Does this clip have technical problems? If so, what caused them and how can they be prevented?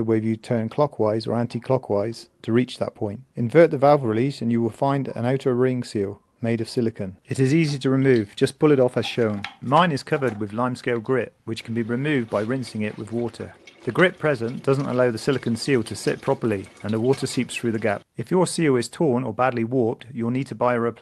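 No, nothing stood out on listening that would call for a fix or for any preventive step.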